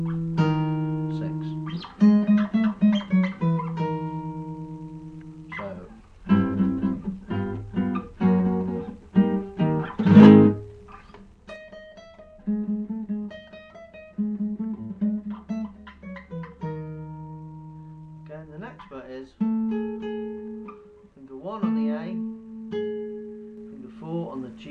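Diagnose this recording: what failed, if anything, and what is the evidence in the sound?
Zipper noise at the gain stage, applied in coarse steps without smoothing: from 11.01 to 11.69 s the level drops about 10 dB in audible 3 dB steps, and from 23.38 to 24.58 s it rises about 10 dB the same way, ticking with each step. These moves click at every increment.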